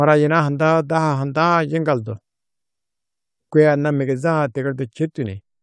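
No audible technical faults occur anywhere in this recording.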